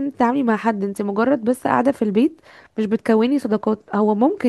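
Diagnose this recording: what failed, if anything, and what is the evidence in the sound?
Nothing in this speech recording points to a failure at any stage, so there's no fault to trace here.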